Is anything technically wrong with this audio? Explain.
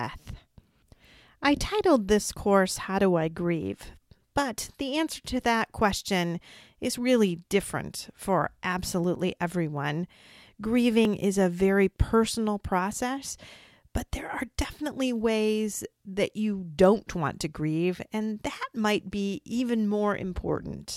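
Yes. At 11.05 s the speech skips forward abruptly, with no gap of silence: a short stretch of sound, roughly 10 ms, is missing and the audio on either side is butted straight together. This is likely a dropped buffer (overrun), where the recording software failed to read a block of samples before the audio hardware wrote over it. That block is lost, so the stream jumps ahead at that point.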